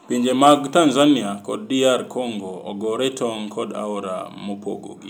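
No technical faults can be heard in the recording at any point, and the speech signal stays intact throughout.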